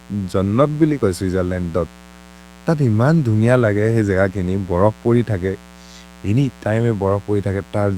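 Mains buzz runs from start to finish under the speech, built on a 60 Hz mains frequency and sitting roughly 25 dB below the speech. Something in the chain, such as a dimmer, a rectifier or an unshielded run, is letting sharp switching spikes through twice per mains cycle, so the interference arrives as a dense stack of 60 Hz harmonics climbing into the kilohertz range. The result is a constant raspy buzz rather than a pure low hum.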